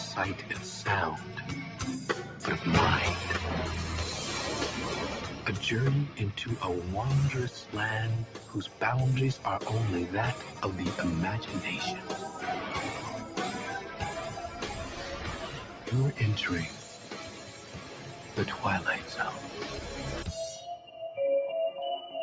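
From start to finish, a noise suppressor applied to music or sounds is working on this audio. Built for speech, it reads steady tones and decaying tails as noise and pulls them down while letting onsets through, so the level swings by around 10 dB and the sound pumps and thins. A waveform shows the envelope breathing unevenly, and a spectrogram shows sustained bands fading patchily between bright attacks, all of it capped near 8 kHz by the call's normal microphone processing.

On top of that steady pumping, the suppressor cuts individual stretches of sound harder at 1.21–1.45 s, 2.26–2.43 s, 5.31–5.46 s, 8.27–8.81 s, 15.63–15.87 s, 16.82–17.11 s and 17.31–18.37 s. Each time it mistakes the held or fading content for noise and drops it by about 5 dB, or about 4 dB in the 16.82 s dip. The sound briefly sinks or its tail is clipped short, and the longest dip, near 17.3–18.4 s, lasts about a second. 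On a waveform these appear as shallow notches in the envelope. On a spectrogram, sustained energy dims in those windows while sharp onsets stay bright.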